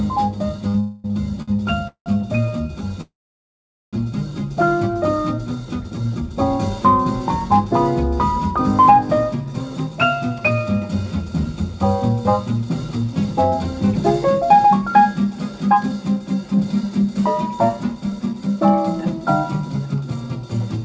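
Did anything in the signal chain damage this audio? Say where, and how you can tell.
Yes. The damage happened in the network and jitter buffer stage of a call. Two short stalls from a late packet occur at 0.68 to 0.76 s and at 1.42 to 1.50 s. In each, a sound is held too long, by about 59 ms and then 54 ms. Nothing is lost. The buffer ran dry, the receiver stretched the last sound, and playback resumed from the same point once the packet arrived.

Three call audio freezes follow. The first, at 0.80 to 1.06 s, is a held buzz lasting about 243 ms with no silence. The second, at 1.88 to 2.08 s, buzzes briefly and then goes silent for about 100 ms. The third, at 3.01 to 3.95 s, fades out and stays silent for about 810 ms. The audio then resumes where it stopped. The likely cause is packets held up in transit, which left the buffer empty.

A jitter buffer speed-up runs from 17.77 to 20.77 s. 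The audio plays at about 108% speed with the pitch unchanged, so it sounds hurried. About a fifth of a second in total is trimmed. The buffer had built up more delay than it aims for. To cut that delay, it removed many short pitch-period slices in a row. The codec path itself is intact: the audio stops at 8 kHz, which fits G.722 at 64 kbps.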